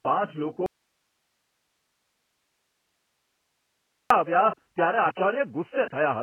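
AAC compression runs from the start: nothing is heard above 3.1 kHz, leaving the speech dull and smeared, likely from heavy AAC-LC coding at a rate that fits roughly 12 kbps.

An audio dropout to a faint residue follows at 0.66 s, just after "પાંચ લોકો": the signal likely broke while the path stayed live, leaving only hiss about 50 dB down until 4.10 s.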